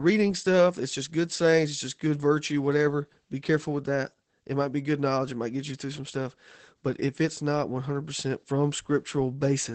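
Opus voice compression runs through the whole clip. The speech is held to a wideband range, with nothing above about 8 kHz, so sibilants and breathy detail are dulled. The coder is working in its SILK linear-prediction mode, modelling each short frame as a vocal-tract filter driven by a coarsely quantised excitation. That coarse excitation makes the voice plainly hoarse and faintly robotic, consistent with a low rate around 12 kbps in 20 ms frames.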